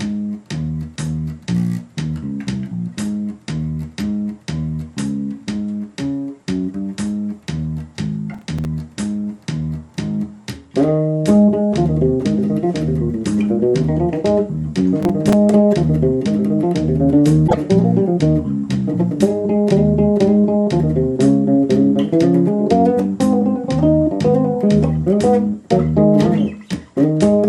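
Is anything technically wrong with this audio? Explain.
Yes, the audio has two kinds of technical fault.

Processor overload crackle occurs twice, from 8.34 to 8.65 s and from 15.03 to 15.33 s. The processor couldn't finish its small audio buffers in time and missed several in a row, each leaving a brief hole of silence with abrupt edges. The gaps are a handful of milliseconds each, which fits a buffer of around 5 ms. They sound like a gritty burst of crackle riding over the sound. On a waveform each burst shows as a cluster of tiny flat-line dropouts to silence. A spectrogram shows thin vertical broadband streaks where each hard edge splatters energy across all frequencies.

Damaged data in a compressed stream appears from 17.44 to 17.55 s. Corrupted bytes left the decoder unable to read those frames correctly, so it lost sync and skipped ahead to the next valid frame header. It is heard as a brief glitch in the sound.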